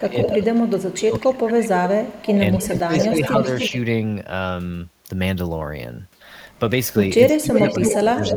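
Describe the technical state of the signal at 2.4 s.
An echo leak, 1.87 to 3.71 s: a distinct speech copy trails 286 ms behind, about 5 dB quieter, likely unremoved loudspeaker pickup, unlike reverb's smooth decay.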